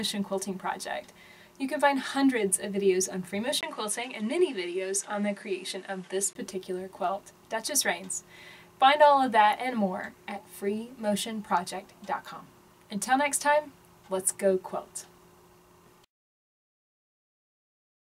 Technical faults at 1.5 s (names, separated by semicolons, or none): none